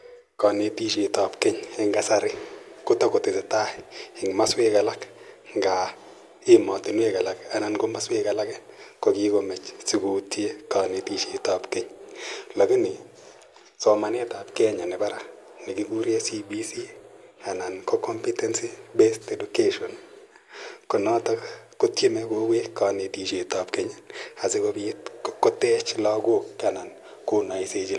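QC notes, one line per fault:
No faults found on this speech clip; nothing to log.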